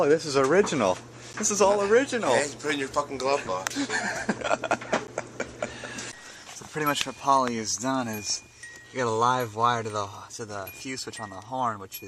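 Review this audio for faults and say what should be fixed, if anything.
Two blocks of digital silence, at 1.33 s and 5.07 s. Each 10 ms gap cuts the sound out with no fade, short enough to be heard as a tick or dip. Make sure the output buffer is always filled in time.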